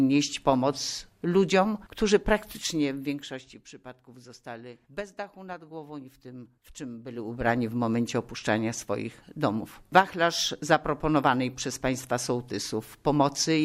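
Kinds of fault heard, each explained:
Zipper noise: The gain was moved in coarse steps, about fifty a second, with no smoothing between them, so each jump puts a tiny click into the waveform. Here it sounds as a fast ticking, zipping texture riding on the audio during a drop of roughly 15 dB from 2.52 to 3.65 s, and again during a quicker rise of about 15 dB, in 1 dB steps, from 7.04 to 7.49 s.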